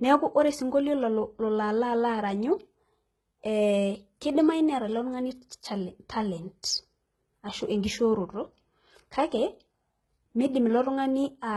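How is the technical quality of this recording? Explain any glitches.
Heavy compression damage runs throughout. Sibilants sound gritty and lispy, the treble is synthetic, and nothing sits above about 11.8 kHz. This is likely HE-AAC compression at a very low rate, around 16 kbps, rebuilding the top octaves from copied lower bands.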